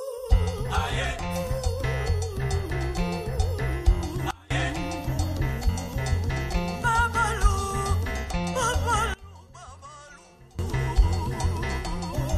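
Sudden gain jumps at 4.31 to 4.51 s and 9.14 to 10.59 s drop the audio and its background noise together by about 24 dB and about 22 dB, with no fade either way. The likely cause is a digital gain change applied instantly, without a ramp.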